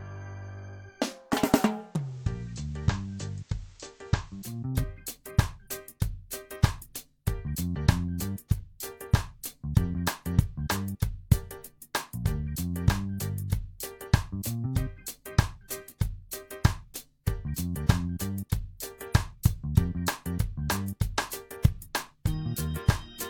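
At 1.76 s the sound blends from digital radio to analogue, a cross-fade of about 0.42 s onto the station's FM signal after the digital stream is lost, and it returns to digital at 4.69 s. During that stretch the level drops by about 4 dB, and a hiss sits roughly 30 dB below the programme. Unlike a plain dropout or filter fault, the audio never stops and the change arrives as a smooth fade.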